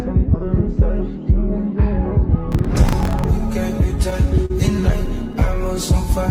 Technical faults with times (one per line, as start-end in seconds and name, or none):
2.52-3.28 processor overload crackle
4.46-4.52 short stall from a late packet